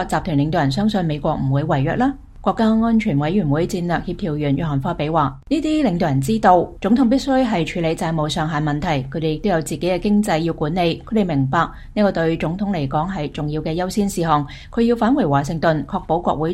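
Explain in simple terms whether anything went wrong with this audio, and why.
Nothing went wrong with this audio, and there is no fault to point to anywhere in it.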